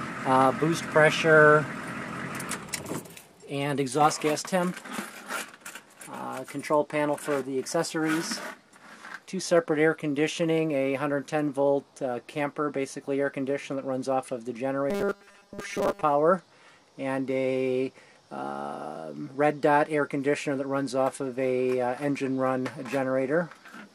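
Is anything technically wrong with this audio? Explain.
Yes. From 14.90 s to 16.03 s the audio takes on robotic sound from repeated short buffers. It turns into a rigid, metallic buzz at a fixed 200 Hz that follows the original sound only loosely. The likely cause is new audio arriving too seldom, so playback keeps reusing the most recent short block, about 5 ms long, which fits the 200 Hz buzz. Roughly two-thirds of that stretch is repeated material rather than real audio.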